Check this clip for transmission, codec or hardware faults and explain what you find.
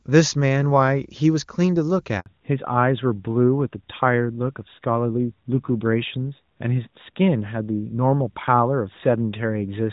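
Two faults show up, both right around the 2.2-second mark.

The handover gap runs from 2.2 to 2.26 s. The call switched networks, no frames arrived for about 60 ms, and the sound drops out briefly.

The fallback to narrowband starts at 2.26 s and lasts to the end. The call left HD Voice for a narrowband codec, so everything above 4 kHz is gone and the speech turns duller and rougher.

Before the switch, the wideband HD Voice path sounds clean, with little or no codec damage.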